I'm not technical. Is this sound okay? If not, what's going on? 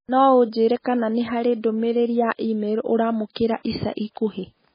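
No, it isn't quite okay. The whole clip is speech that sounds dull and muffled, because nothing above about 5 kHz comes through, so the crisp top end of the voice is simply gone. There's also a watery, swirly quality the entire way through, with s sounds turning metallic and the starts of sounds smeared. That pattern is likely heavy MP3 compression, where the file was squeezed so hard that the encoder threw away the treble and much of the fine detail.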